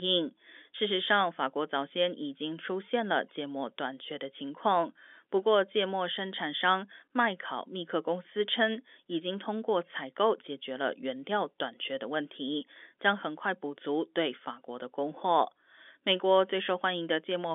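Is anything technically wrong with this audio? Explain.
No, nothing here is technically wrong.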